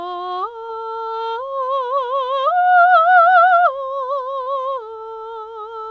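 Music sent over a call link, nothing above 8 kHz, which fits G.722, shows short concealed packet loss at 0.66–0.70 s and 4.44–4.48 s. About 20 ms was missing each time and was patched by extending the preceding sound. The result is a brief smear rather than the silent hole or sharp click of an unconcealed dropout.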